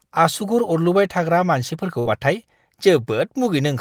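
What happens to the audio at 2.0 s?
The speech briefly freezes into a held, fading smear of its last sound from 1.99 to 2.07 s, then jumps ahead. This is a burst of packet loss: about 60 ms went missing, and the receiver filled the gap by extending and attenuating what came before.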